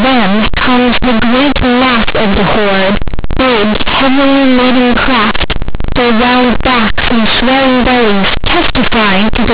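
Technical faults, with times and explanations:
Throughout, companded audio read as linear: the speech was stored as A-law bytes but played back as plain 8-bit samples with no expansion, so every sign change jumps across half the range, quiet passages come out as loud as peaks, and pauses fill with harsh, buzzy noise.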